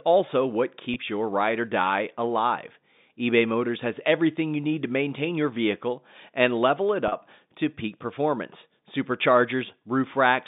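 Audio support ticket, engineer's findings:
Packet loss with pitch repetition, 0.94–0.96 s (before "your ride or die") and 7.08–7.12 s: last pitch period repeated, short buzzy hold. Fits one, then two, 20 ms packets lost.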